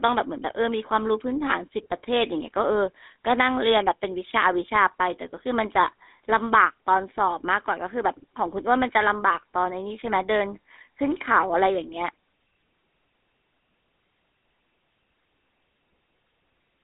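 Speech passed through a GSM full-rate codec for its whole length, at a rate that fits the 13 kbps of that first mobile standard. The codec rebuilds the voice from a vocal-tract model fed by an evenly spaced pulse train that holds only a third of the excitation samples, so the voice takes on a plainly audible buzzy, gravelly roughness. The line band spans roughly 250 Hz to 3.6 kHz, and nothing survives above 3.8 kHz.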